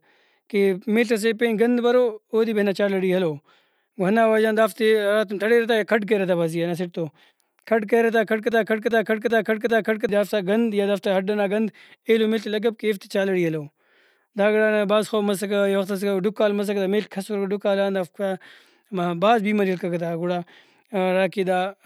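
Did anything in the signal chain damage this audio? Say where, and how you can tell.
Yes. A broken-record loop runs from 8.52 s to 10.09 s, just after "کھڈ کریرہ تا کھڈ" and before "دافتا گند یا دافتا". A 0.39 s fragment of speech repeats four times back to back with identical content, and the sound that should have filled that stretch never arrives. The likely cause is a stall in the playback or streaming buffer, which kept re-sending the last block it held until fresh data resumed.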